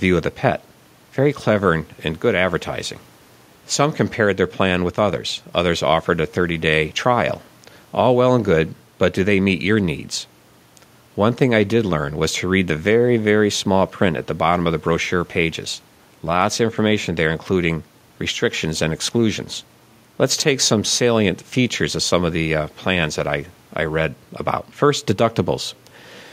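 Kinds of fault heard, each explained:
Chunks out of order: at 20.34 to 20.42 s, just before "some salient features of", a 20 ms slice of speech lands three chunks late, so that stretch plays scrambled. Nothing's lost, but you hear a brief jumbled blip.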